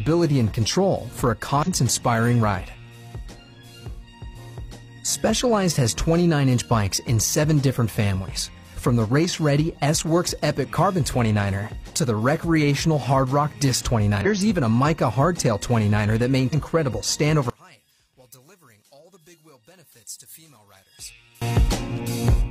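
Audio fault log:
1.63 to 1.68 s, 14.21 to 14.26 s and 16.49 to 16.55 s: damaged data in a compressed stream. Each is a short glitch of about 50 ms. What's happening is that a few bytes in the encoded stream got mangled, so the decoder chokes on those frames, loses its place and hunts for the next valid frame header before picking up again.
17.5 to 21.4 s: one channel inverted. For about four seconds the mono sum drops by about 25 dB, leaving a faint remnant with the solid centre of the sound gone. The likely cause is one stereo channel flipping polarity here, so everything common to both sides cancels when they're added together, and only the small left-right differences survive.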